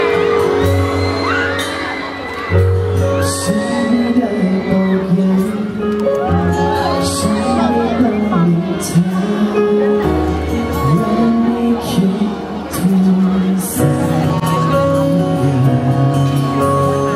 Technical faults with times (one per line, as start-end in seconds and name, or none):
none